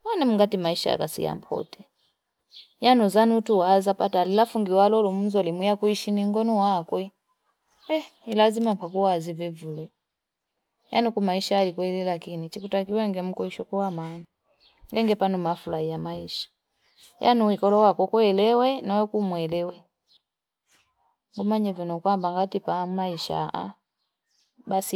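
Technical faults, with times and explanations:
No technical faults are heard in this speech clip.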